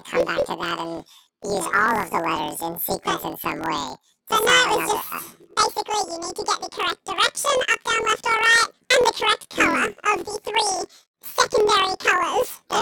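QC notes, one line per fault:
Throughout: planar audio read as interleaved. Each 24 ms block of separate left and right samples is read as alternating pairs, so the speech plays an octave high at double speed, left then right, with a robotic buzz at the 41.7 Hz block rate.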